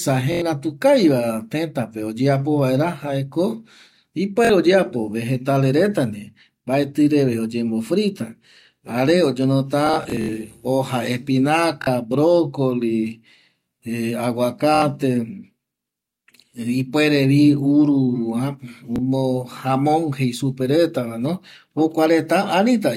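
Bluetooth stutter occurs at 0.32–0.42 s before "kaviva tëtape oyeapo vaera", 4.45–4.50 s before "oyeapo vegetale reta", 7.87–7.89 s after "mbaetƚreve oyembo", and at 9.87–10.29 s, 11.82–11.87 s, 14.75–14.82 s and 18.96–18.98 s. Lost or late packets make the receiver replay a slice of about 23 ms, and a run of repeats is heard as a buzz. Speech then resumes further on, as if it had kept playing. The 9.87 s event is a scattered burst with a longest run of about 70 ms.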